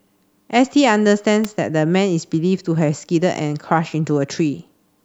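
At 1.44 s a sharp snap cuts across the speech, reaching fairly high level, near -10 dBFS. This electrical switching spike is likely a nearby switch arcing into the line. Unlike a dropout, the speech carries on unbroken beneath it, with the snap simply added on top.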